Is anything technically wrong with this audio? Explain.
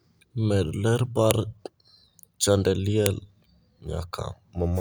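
Yes. There's a file header played as audio at 1.31 s and again at 3.06 s: the speech was stitched from separate WAV pieces with their headers left in, so those header bytes come out as samples, giving a sharp, loud click right where each new piece begins.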